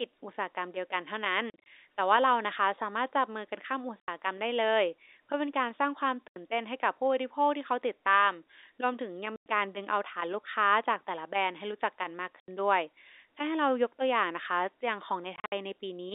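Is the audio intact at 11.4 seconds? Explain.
Yes, the speech at 11.4 s is intact, with no fault at that moment, only the narrow band of the G.711 telephone line it is carried on.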